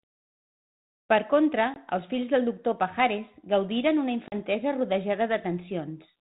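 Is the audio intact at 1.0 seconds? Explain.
Yes, the audio is intact at 1.0 seconds, with no dropout, click or other fault at that moment.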